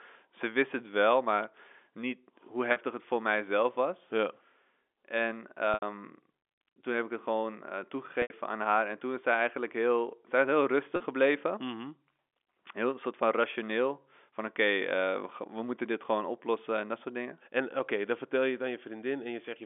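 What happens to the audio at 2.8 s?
Right around there, just before "het voor mijzelf was", there's a packet loss with pitch repetition from 2.72 to 2.76 s. About 40 ms went missing, which fits two 20 ms packets, and the decoder covered it by looping the last pitch cycle, so you hear a brief, slightly buzzy held tone.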